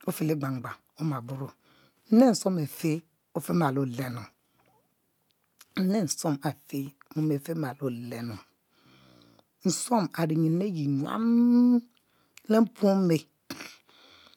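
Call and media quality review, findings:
No faults found in the speech audio; nothing heard that needs action.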